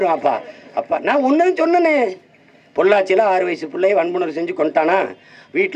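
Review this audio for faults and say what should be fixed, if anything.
Nothing stood out on listening, so there is nothing here that needs fixing.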